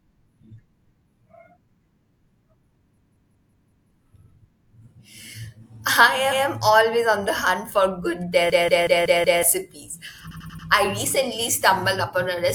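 At 2.97 s the speech locks into a system hang loop until 3.90 s. A 186 ms piece, which fits an 8192-sample ring buffer, repeats five times at 5.38 Hz, a machine-gun stutter that replaces about a second of speech. On a waveform it shows as identical repeating blocks; a spectrogram shows copied patterns side by side.

From 6.27 to 6.41 s, repeated frames replay a 139 ms stretch once, adding 139 ms. The same hang loop returns from 8.50 to 9.43 s. From 10.27 to 10.64 s a 93 ms block plays four extra times, adding 372 ms, heard as a rapid stutter. Both appear as duplicated waveform segments.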